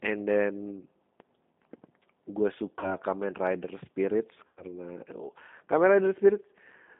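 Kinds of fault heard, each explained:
G.729 codec: The speech was carried by a low-rate VoIP coder at 8 kbit/s. Rather than sending the waveform, it sends a vocal tract filter, a pitch predictor and a few pulses per 10 ms frame. The audio is limited to a telephone band of about 200 Hz to 3.6 kHz, with nothing above. Throughout the clip the coding damage is plain: the voice is intelligible but rough and synthetic.
DC step: At 1.20 s the waveform's zero line suddenly jumps, as when a converter recalibrates or an input carrying an offset is switched in. The shift then drains away rather than holding, as if through a high-pass around 20 Hz. It is heard as a single low thump or click, and the speech carries on over it without any change of its own.
VoIP packet loss concealed by the speech codec: Packets went missing and the decoder covered the gaps by extrapolating from its last pitch and filter state while lowering the gain. 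From 2.79 s to 2.91 s about 40 ms is lost, which fits two 20 ms packets. From 4.47 s to 4.65 s about 100 ms is lost. Each gap is stretched into a buzzy tone or coloured noise that fades, and the voice stays weak and distorted for a while after audio returns.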